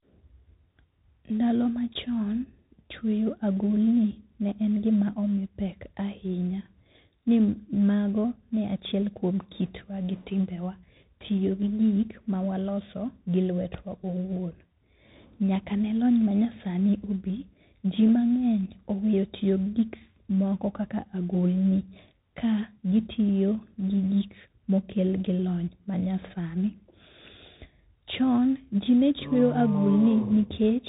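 From start to finish the speech carries tandem speech coding. The signal was decoded and re-encoded as it crossed links with different codecs. What can be heard fits a chain running from CVSD through G.711 A-law into G.726 at 32 kbit/s. Each stage reworks the previous stage's errors, so the speech sounds rough and noisy. On a spectrogram nothing appears above 3.8 kHz.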